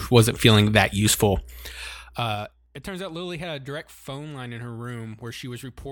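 Between 1.64 and 2.72 s the gain is pulled down in coarse 3 dB jumps rather than along a continuous ramp. The jumps come about seven times a second and take the speech down by roughly 20 dB. With no smoothing between steps, each jump leaves a small discontinuity in the waveform. The result is a ticking zipper noise riding on the speech as it fades.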